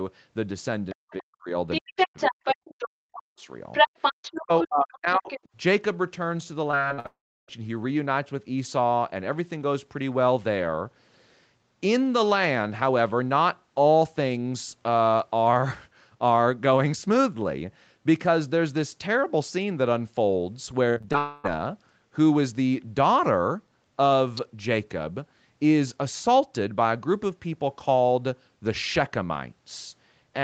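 From 0.9 to 1.2 s a faint second voice, about 25 dB under the talker, sits behind the speech. It returns at about equal level from 1.71 to 3.22 s and from 3.72 to 4.97 s, then briefly at about 15 dB down from 5.28 to 5.4 s. This is the other side's voice leaking through, likely loudspeaker echo the echo canceller failed to remove. Overlapping this, from 0.94 to 3.47 s and again from 4.34 to 5.3 s, the talker's own speech sinks and cuts out in deep drops of roughly 40 dB. That is speech suppressed in double talk: with both sides active, the canceller likely turned everything down. From 6.71 to 7.06 s the speech turns choppy, with four short holes patched by stretching the previous sound. That is repeated packet loss, and it runs straight into a long network dropout from 7.06 to 7.5 s, where a fading buzz gives way to about a third of a second of silence before the sound resumes with material missing. 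The same pattern recurs: gappy packet loss from 20.9 to 21.16 s with five holes, then a dropout from 21.18 to 21.46 s bridged entirely by a smeared continuation of the last sound rather than silence. At 24.38 s a sharp snap lands on top of the audio, an electrical switching spike, likely a nearby arc picked up by the line. Throughout, the call path's Opus coding limits the top end to 8 kHz.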